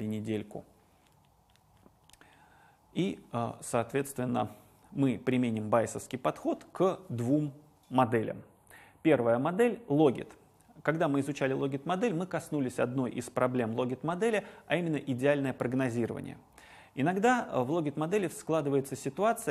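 From 8.01 to 10.0 s the sound turns hollow and phasey. This is channel delay (comb filtering): one channel lags by roughly a tenth of a millisecond, notching from around 5 kHz.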